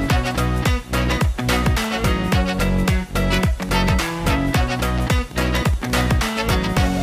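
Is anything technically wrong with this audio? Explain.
Yes. From 3.69 to 5.91 s, a train of clicks, about twenty irregular pops near 7.7 per second, ticks as loud as the sound itself, likely from interference or a faulty connection.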